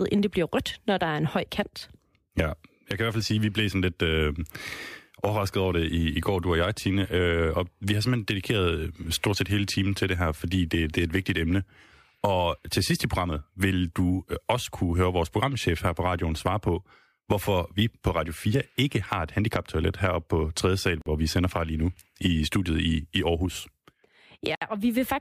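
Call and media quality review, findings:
Gap at a join of encoded pieces: speech encoded as separate segments, concatenated without trimming encoder start delay or last-frame padding. Silence of 47.5 ms at 21.02–21.06 s, hard edges smeared by the codec. Second gap of 64 ms at 24.55–24.62 s, same mechanism. Speech resumes from the exact point it stopped each time, so nothing is lost.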